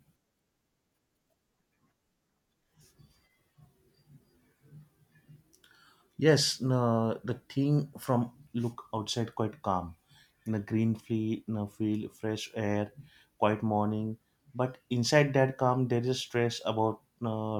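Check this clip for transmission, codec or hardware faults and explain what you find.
Nothing stood out on listening to the speech; no transmission, codec or hardware problem could be heard anywhere in it.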